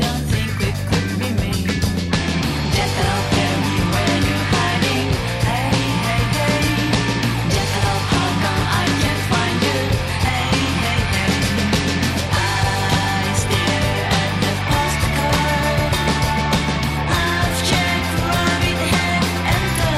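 No technical faults are audible anywhere in the recording.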